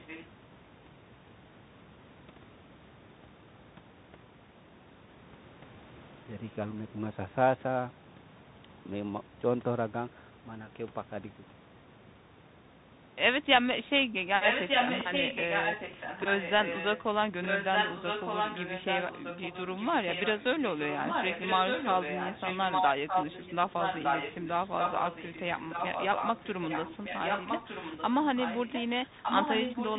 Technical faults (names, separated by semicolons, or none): echo leak